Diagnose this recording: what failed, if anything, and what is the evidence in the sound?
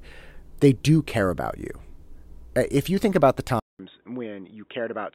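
Device stage: after "you think about the", 0.19 s of silence at 3.60 s, then nothing above 3.8 kHz, about 10 dB quieter, new noise. Likely the input switched to a poorer device.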